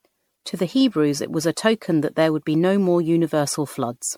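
All the way through, the speech has that swirly, hollow smear of generation loss, with blurred consonant attacks and content still reaching 19.9 kHz. It's likely from MP3 re-encoded around ten times at something like 96 kbit/s, each pass adding fresh quantisation damage.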